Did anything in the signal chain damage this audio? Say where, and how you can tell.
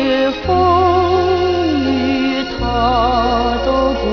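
Yes: aliasing from a sample-rate conversion, heard throughout. Gritty, inharmonic tones fold about 5.5 kHz, roughly 20 dB down, fitting an unfiltered 44.1 kHz to 11 kHz drop, unlike a clean low-pass dulling.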